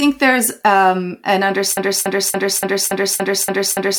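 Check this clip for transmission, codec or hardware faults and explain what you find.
A broken-record loop starts at 1.77 s, just after "there's um an", and runs to the end. A 285 ms fragment repeats exactly, back to back, eight times, likely because the stream stalled and kept resending its last buffered piece, so the intended audio is lost.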